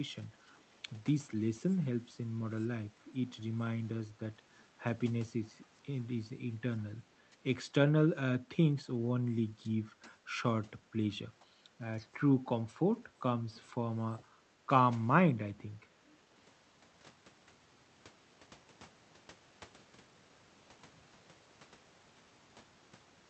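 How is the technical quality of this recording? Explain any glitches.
The recording has two call-processing faults: repeated background gating and one brief echo leak.

Background gated by the echo canceller: at 5.32–5.46, 9.57–9.64, 13.01–13.19, 14.17–14.68 and 15.92–16.05 s, the room tone dips by about 8 to 13 dB. The canceller ducks the microphone while the far end is playing, then releases it.

Echo leak: at 13.55–13.61 s a very faint copy of the speech returns about 460 ms late. This is likely residual loudspeaker pickup that the canceller failed to subtract. The sound comes through a call codec band-limited to 8 kHz.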